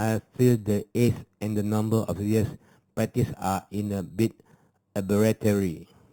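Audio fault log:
throughout imaging from sample-and-hold upsampling: a metallic fizz sits in the 4 to 8 kHz band at about 21 dB below the speech, consistent with 8 kHz audio held to 48 kHz without smoothing. Unlike hiss, it tracks speech loudness, and its pitch moves against the voice.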